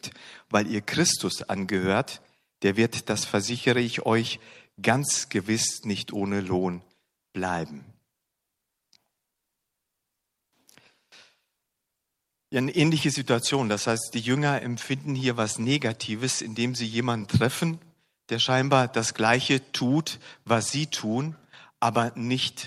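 No technical faults can be heard anywhere in the speech.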